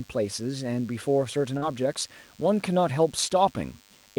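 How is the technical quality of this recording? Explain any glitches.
The recording has two faults: a constant buzz and one brief dropout.

A DECT cordless phone buzz runs through the whole clip. A nearby DECT handset or base station transmits a short radio burst every 10 ms. The audio circuitry rectifies those bursts into a thin, steady 100 Hz buzz with many harmonics. It sits roughly 30 dB below the speech.

A short concealed packet loss occurs from 1.57 to 1.63 s. About 40 ms of audio never reached the decoder in time. The receiver filled the gap by extending the preceding sound and then blended back into the real signal. It is heard as a brief smear or wobble.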